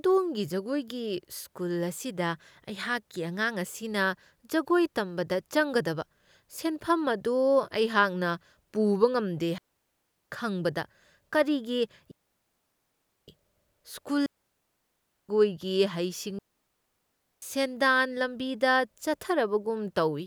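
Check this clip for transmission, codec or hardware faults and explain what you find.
Four digital wireless dropouts interrupt the speech, at 9.58–10.30 s, 12.11–13.28 s, 14.26–15.29 s and 16.39–17.42 s, lasting 0.72 to 1.17 s. Each time, the receiver lost too much data and muted with a rapid fade, leaving clean near-silence without noise bursts.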